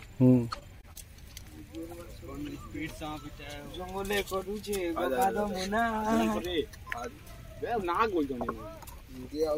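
From 0.53 to 0.97 s, repeated packet loss (robotic sound) makes the audio choppy, with pieces missing. Several short holes, the longest about 20 ms, are patched by extending the preceding sound. On a spectrogram these show as smeared, frozen bands. The waveform shows repeated, blocky segments.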